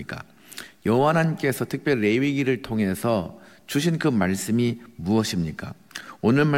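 No technical faults are audible.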